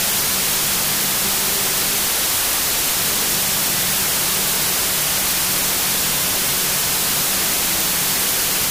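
Throughout, a wrong sample width fault: the sound fits 32-bit data read as 16-bit. Loud noise buries it, playing at half speed, an octave low.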